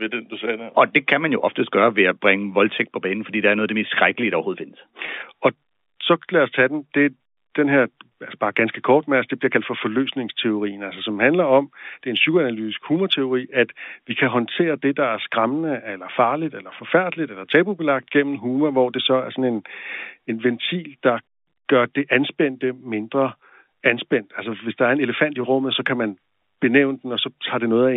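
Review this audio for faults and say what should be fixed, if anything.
Packet loss with pitch repetition at 5.06–5.08 s: about 20 ms of the stream went missing, which fits two lost packets, and the receiver filled the gap by repeating the last pitch period of the telephone-band speech (200 Hz to 3.6 kHz). The result is a brief held, buzzy sound before the speech resumes. Adding jitter buffering or forward error correction on the transmission link would prevent the gap.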